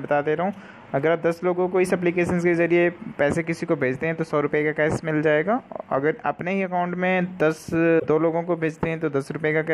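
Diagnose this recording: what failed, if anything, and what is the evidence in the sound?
The failure is in the codec stage: damaged data in a compressed stream. From 7.96 to 8.05 s, roughly a tenth of a second, the sound breaks up instead of continuing cleanly. That's the decoder hitting a patch of bad bytes, misreading or rejecting the frames there, losing sync, and hunting for the next valid frame header before normal decoding picks up again.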